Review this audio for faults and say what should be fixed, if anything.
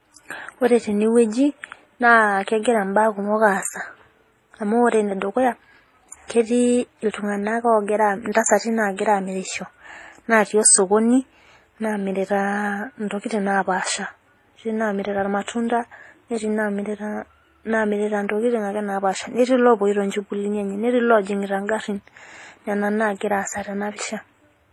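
Transcoding between lossy codecs, throughout the speech: two kinds of compression damage are heard together, a dull, band-limited core under a smeared upper band. This points to an MP3 encode near 32 kbit/s likely re-encoded as HE-AAC near 24 kbit/s. The second codec spent bits copying the first one's artefacts and added its own, while the earlier low cut-off stayed. To prevent it, encode once from the original uncompressed source rather than converting an already compressed file.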